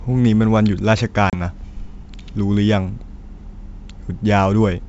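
A speech recording carried as G.722 wideband at 64 kbit/s, with energy reaching about 7 kHz, shows packet loss on an ADPCM call between 1.30 and 1.41 s. About 30 ms, a few packets' worth, drops to hard-edged silence: a flat gap in the waveform and a blank vertical stripe on the spectrogram. On resumption the decoder's predictor and step size no longer match the sender's, giving brief, slight distortion before it settles.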